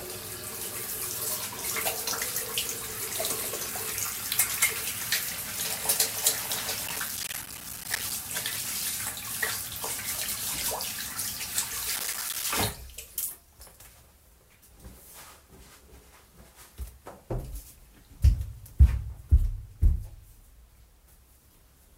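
Gritty crackle tears through the sound from 6.88 to 8.12 s and again, more briefly, from 11.96 to 12.44 s. This is processor overload crackle: buffers of roughly 5 ms repeatedly missed their deadline, each dropping out as a tiny hard-edged silent gap, about 70 in the first stretch and 20 in the second.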